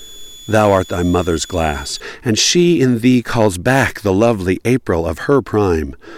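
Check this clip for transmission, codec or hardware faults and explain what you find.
A switching supply whistle runs from 0.0 to 2.0 s, ending just before "and she in thee". A power converter cycling audibly leaks a faint high whistle, about 25 dB below the speech, drifting between 3.42 and 3.45 kHz. On a spectrogram it appears as a thin, slightly wavering horizontal line.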